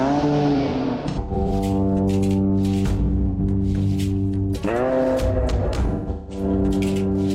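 AAC frame loss with concealment breaks up the music three times: scattered dropouts from 0.56 to 1.51 s, totalling about 430 ms with the longest run near a tenth of a second; a single 85 ms gap at 3.30 s; and 5.86 to 6.43 s, about 340 ms lost with runs up to roughly 150 ms. The decoder patches each gap by reusing the last good spectrum, so the music turns smeared, noisy and phasey in those stretches instead of dropping out cleanly.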